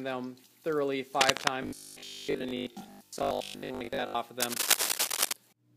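Cable scratch noise at 1.20 to 1.49 s and again at 4.40 to 5.33 s lays dense, uneven scratching bursts over the audio, a little louder than the sound itself. The likely cause is a worn cable, connector or control being moved, so its contact resistance jumps about rapidly. Robotic sound from repeated short buffers runs from 1.63 to 4.17 s. The audio becomes a rigid, metallic 50 Hz buzz because a 20 ms stretch is likely replayed over and over while new audio arrives too seldom, leaving most of the real signal in that span skipped.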